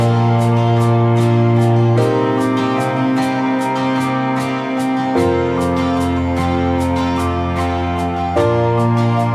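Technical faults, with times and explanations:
Nothing here stands out as a technical fault; it's all good from the first moment to the last.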